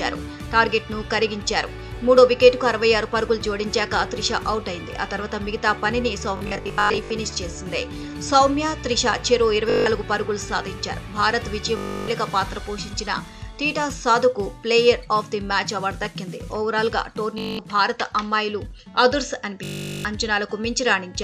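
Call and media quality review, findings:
Bluetooth stutter at 6.37–7.10 s (scattered, about 0.47 s lost, longest run near 0.1 s), 9.70–9.86 s, 11.77–12.08 s, 17.38–17.59 s, 19.64–20.05 s. Buzzy machine-gun repeats. Probable component: Bluetooth link. Receiver replays last buffer when packets are lost or late, and the repeat period fits roughly 20 ms packets. Waveform: identical short cycles tiled end to end, then audio resumes further on, skipping the missing span. Spectrogram: dense vertical striations.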